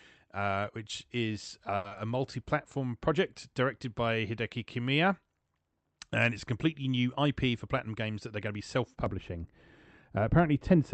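Speech carried over a call path whose Opus coding limits the band to 8 kHz, with coding noise consistent with a modest bitrate, shows several faults. A short stall from a late packet at 1.76–1.85 s holds one sound for 80 ms with nothing lost. On a spectrogram it shows as frozen, repeated harmonics. Right after "uh which is", a short concealed packet loss at 1.88–1.92 s bridges a 60 ms gap with only 30 ms of synthesized fill, leaving a brief smear. A jitter buffer slow-down at 2.12–2.32 s repeats pitch periods to add 41 ms, so the sound plays at 83% speed at unchanged pitch, with stretched, near-identical cycles in the waveform. Between "it's completely new" and "to be self", a jitter buffer speed-up at 7.24–8.50 s trims pitch periods to run at 107%, removing about a tenth of a second. The result sounds hurried, with shortened syllables and no pitch shift. Right after "to be self", from 9.06 s to the end, de-emphasis applied wrongly tilts the treble down by about 11 dB at 10 kHz relative to 1 kHz, muffling the sound and visibly fading the upper spectrogram.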